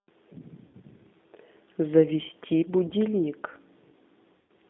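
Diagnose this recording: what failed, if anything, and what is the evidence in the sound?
The codec stage is at fault throughout: the speech has passed through the G.729 codec (the G.729A variant at 8 kbit/s). The band is confined to roughly 200 Hz to 3.7 kHz, with nothing above, and the voice has a plainly audible rough, synthetic grain. At this rate the coder sends only a vocal tract filter, a pitch estimate and a few pulses per 10 ms frame, so fine waveform detail is rebuilt rather than preserved.

The network stage shows VoIP packet loss concealed by the speech codec at 0.67 to 0.75 s, 2.87 to 2.93 s and 4.37 to 4.50 s. At each point the speech smears into a buzzy tone or coloured noise that fades, instead of dropping to silence. The decoder is extrapolating from its last pitch and filter while lowering the gain. The missing stretches are 60 ms, 40 ms and 120 ms, which fits runs of three, two and six 20 ms packets, and the sound stays weak briefly after each gap as the decoder's state recovers.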